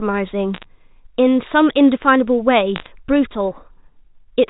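From 0.54 to 0.64 s and again from 2.76 to 2.88 s, bit errors on a digital phone line flip single samples in the speech, producing brief bursts of sharp ticking crackle.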